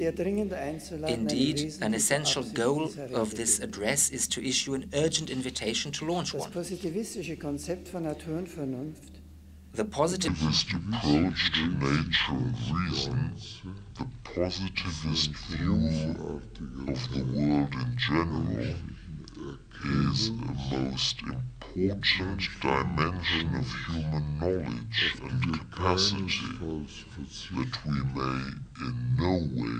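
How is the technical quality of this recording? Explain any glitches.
Quality holds for the first ten seconds, then a section at the wrong speed runs from 10.28 s to the end. The sound turns abruptly deep and slow, dropping close to ten semitones, because playback runs at 0.583 times the recorded rate. Speed and pitch fall together, which likely means that stretch was fitted to the wrong clock during editing or playback.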